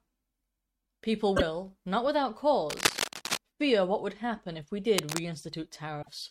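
From 1.36 to 1.42 s, just before "not without", the sound lurches forward with a brief glitch. This is a broken MP3 bit reservoir, likely from dropped frames, leaving the next 24 ms frames to decode borrowed bytes from the wrong frame. A plain dropout would give clean silence instead. The same jump recurs at 6.01 to 6.09 s.

Between "not without" and "fear what would happen", from 2.69 to 3.37 s, dense ragged scratching sits at about the speech level. This is cable scratch noise, likely a worn contact being moved. A quieter burst, about 5 dB down, follows "would happen if we" at 4.98 to 5.20 s. Its uneven rustle, unlike steady hiss, gives it away.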